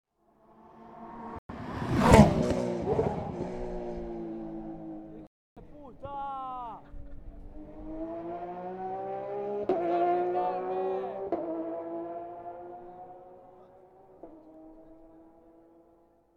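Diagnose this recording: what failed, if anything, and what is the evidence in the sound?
Two clean gaps in the audio, one from 1.39 to 1.51 s (about 107 ms) and one from 5.27 to 5.58 s (about 300 ms), each resuming further along as if playback never paused. That points to the wireless playback link, likely a Bluetooth dropout where late packets were discarded.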